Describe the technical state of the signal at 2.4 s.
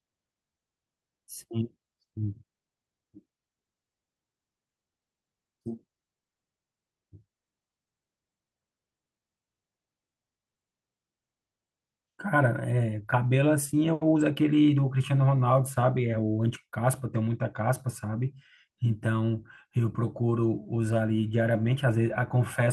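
Right at 2.43 to 2.45 s there's a skip ahead: about a second of the speech got dropped, likely a jitter buffer overflowing while later audio sat waiting, and playback jumps straight forward with no gap filled, so the two sides butt together abruptly.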